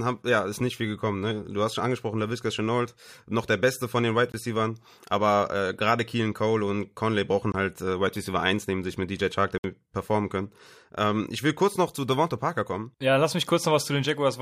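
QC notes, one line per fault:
4.32–4.34 s, 7.52–7.54 s and 9.58–9.64 s, block of digital silence: the output stream had runs of samples set to zero, 20 ms twice and then 60 ms. The speech drops straight to nothing and returns with no fade; the last is a brief hole.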